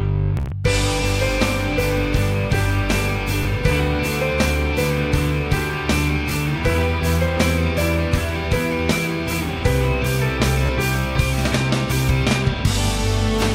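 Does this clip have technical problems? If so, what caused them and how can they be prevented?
Yes, the clip has Bluetooth stutter. Audio packets arrived late or not at all, and the receiver filled each gap by replaying its last buffer. The worst burst, at 0.37–0.52 s, loses about 0.1 s of audio spread over 145 ms, with runs up to 43.5 ms, so it sounds like a brief machine-gun buzz. Shorter single repeats occur at 3.43 s and 6.30 s, and a 29 ms one at 10.66–10.69 s. After each repeat the sound jumps ahead to where it would have been. Keeping the devices close, with a clear line of sight and away from 2.4 GHz Wi-Fi congestion, or using a wired connection, prevents these dropouts.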